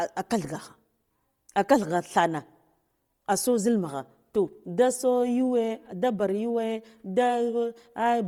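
Throughout the speech, heavy transform-codec damage gives sibilants and breaths a grainy, noise-filled texture, yet content still reaches about 20.2 kHz, so this is not a plain band limit. That points to Bluetooth LC3 compression, likely at a low bitrate around 32 kbps.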